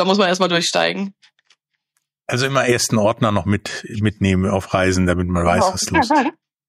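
Nothing is technically wrong with this audio.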